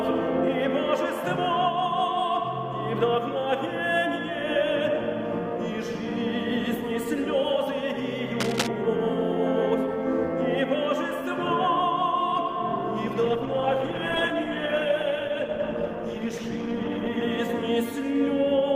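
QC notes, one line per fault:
8.40 to 8.68 s, cable scratch noise: a quarter-second burst of dense, uneven crackle sits over the sound at a level close to the signal itself. It is likely a worn cable or connector being moved, its contact resistance flickering rapidly; unlike a dropout or single click, the sound never stops, it is rasped over.
13.23 to 17.23 s, adaptive stream at a lower bitrate: for four seconds codec artefacts rise, consistent with a switch from 64 to 16 kbit/s Opus. The change arrives and leaves abruptly with no gap, which separates it from a buffering stall or a gradual filter.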